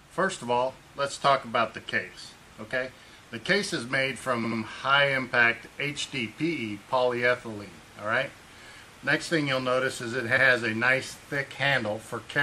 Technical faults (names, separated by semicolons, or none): repeated frames